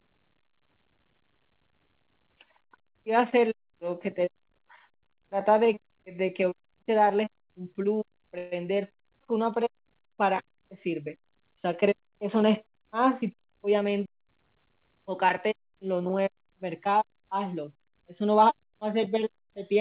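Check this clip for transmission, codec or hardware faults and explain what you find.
Two faults stand out in this speech clip, on top of the narrowband call sound, with nothing above 4 kHz, which fits a G.711 A-law link.

The first is a call audio freeze from 8.38 to 8.54 s. The likely cause is packets stalling in transit so the jitter buffer ran dry. The receiver stretched the last bit of sound into a short fading buzz or hiss for about 135 ms and never went fully silent. When the packets showed up, the speech carried on from where it stopped, so nothing's lost. Everything after just runs about 135 ms later.

The second is a jitter buffer speed-up from 12.71 to 14.44 s. The buffer was holding more audio than it wants, so the receiver trimmed tiny pitch-period slices again and again to catch up, roughly 150 ms in total. The speech plays at about 108% speed but keeps its pitch, so it sounds a touch rushed rather than chipmunky.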